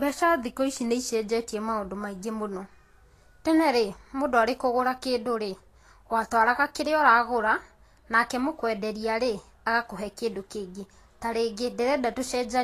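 Speech, carried throughout by what is likely low-bitrate Vorbis compression, the grainy treble pointing to roughly 36 kbps: nothing remains above 14.2 kHz, and the remaining high band is so coarsely quantised that detail turns to hiss, leaving consonant attacks blurred and tones plainly roughened.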